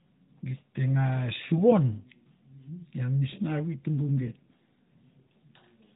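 No faults to report in this speech; the band tops out near 3.8 kHz, which points to the AMR narrowband mobile codec, likely at 12.2 kbps, and that path is working normally.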